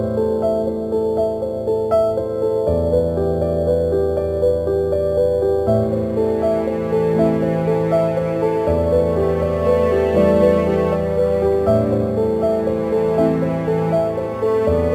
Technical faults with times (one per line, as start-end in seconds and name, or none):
0.00-14.95 crude rate conversion